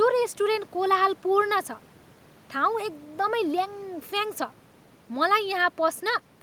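No technical faults can be heard anywhere in the recording. The speech continues without any audible problem from its opening moment to its close.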